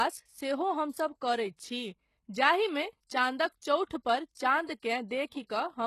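Speech, with treble that sounds synthetic and gritty, and nothing above 12.3 kHz. Damage is plainly audible, likely from HE-AAC compression at a very low bitrate around 16 kbps. Pre-echo smears two attacks. A short hiss runs ahead of each onset, from 3.86 to 3.91 s (47 ms) and from 4.80 to 4.82 s (29 ms), as block-spread quantisation noise fills the quiet gap.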